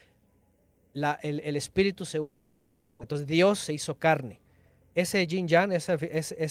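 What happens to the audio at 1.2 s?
Nothing goes wrong at 1.2 s; the speech carries straight through that moment intact.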